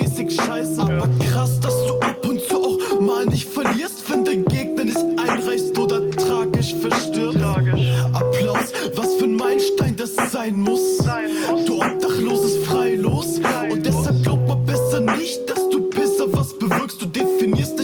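No technical faults are audible anywhere in the audio.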